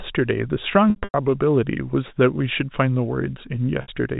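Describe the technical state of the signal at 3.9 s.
At 3.9 s the signal is just recovering from packet loss with pitch repetition spanning 3.82 to 3.88 s. About 60 ms of audio went missing, which fits three lost 20 ms packets. The receiver looped the last pitch period, giving a brief buzzy, held tone that faded out, and speech now cross-fades back in over the narrowband G.711 telephone path.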